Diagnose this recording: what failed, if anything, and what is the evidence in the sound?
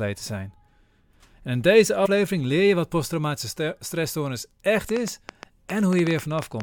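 Damaged data in a compressed stream at 2.05 to 2.07 s, a codec or storage fault: a brief glitch cuts into the speech as the decoder misreads corrupted frames, loses sync and hunts for the next valid frame header.

A train of clicks runs from 4.89 s to 6.62 s: around fifteen sharp, similar ticks at an irregular pace of about 7.6 per second, peaking roughly 10 dB above the speech. The likely cause is interference or a struggling interface at the analogue or converter stage.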